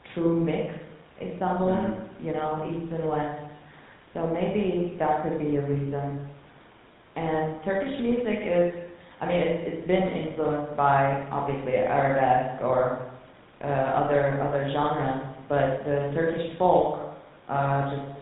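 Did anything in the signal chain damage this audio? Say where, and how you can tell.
Yes, at the codec: GSM full-rate coding, consistent with 13 kbps, throughout. Pulse-driven vocal-tract modelling leaves the speech buzzy and gravelly, with nothing above 4 kHz.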